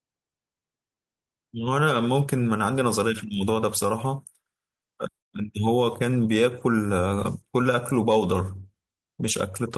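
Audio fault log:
throughout, clock drift between sender and receiver: the sender's clock runs roughly 3% slower than the receiver's, so the jitter buffer keeps draining and the receiver has to keep padding it out. The speech never settles into a steady pace and carries faint, recurring hiccups.
0.24 to 9.52 s, repeated timing corrections: to keep up with the slow sender, the receiver repeatedly re-plays short pieces of the speech, stretching it to 97% speed and adding about a third of a second overall. Each insertion is small, heard as slight stutters at uneven intervals and an unsteady tempo.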